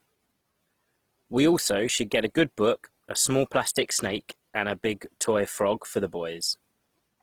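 From start to finish the speech carries the grainy, rough texture of Opus compression, likely in its CELT music mode at a low rate that fits roughly 16 kbps. The encoder holds each band's energy but fills starved bands with folded or noisy content, so voiced sounds turn noisy and sandy. Unlike MP3, there is little swirling or watery warble. The band still extends to about 20.4 kHz rather than collapsing into a muffled, narrowband sound.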